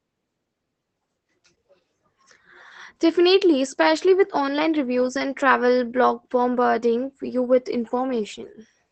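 Opus voice compression runs from start to finish. Nothing is heard above about 8.5 kHz, so the codec has narrowed the audio to wideband and is coding it with its SILK linear-prediction layer. The excitation is coded coarsely, which fits a bitrate near 12 kbps in 20 ms frames. The damage is plainly audible: the speech sounds muffled and hoarse, with a slightly robotic edge where fine detail has been discarded.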